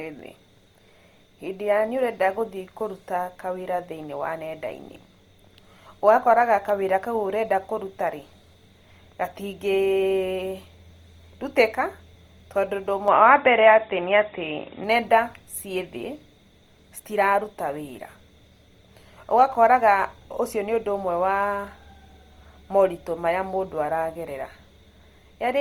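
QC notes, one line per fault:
Throughout: Opus compression. The speech was likely squeezed through a low-rate Opus encoder in its music (CELT) mode, at a rate that fits about 24 kbps. The full band is kept, reaching up to 20.1 kHz, so nothing sounds muffled. The encoder preserves each band's energy but fills the fine detail it cannot afford with folded or noise-like content, so the damage is plainly audible as a grainy, rough texture on voiced sounds rather than swirling.
13.08–14.84 s: input switched to a poorer device. Right after "tondũ ũndũ", the capture likely jumped to a lesser microphone or a headset call profile, then came back. There is no gap at the switch. While it lasts, nothing passes above 3.8 kHz, so the speech turns dull and boxy. The level shifts by a few decibels, and a faint new background noise, far below the speech, appears with the different device.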